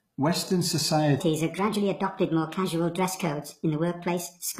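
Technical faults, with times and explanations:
throughout: HE-AAC compression. The treble is gritty and metallic, with sibilants going lispy, and the damage is plainly audible. This likely comes from HE-AAC v2 at a low bitrate, which fits around 20 kbps: only the lower spectrum is coded, and the upper bands are copied up from below and shaped by a coarse envelope, so harmonics fail to line up across the crossover. A spectrogram shows smeared, repeated-looking high bands and nothing above 14.9 kHz.
1.2 s to the end: section at the wrong speed. From 1.2 s the speech jumps to 1.41 times its speed, so it turns hurried and high, with pitch up by about seven semitones. Speed and pitch shift together, which points to the section likely having been played against the wrong clock rather than pitch-processed. On a spectrogram the harmonics step abruptly upward and spread apart at 1.2 s, and in the waveform the syllable envelopes become visibly compressed in time from that point onward.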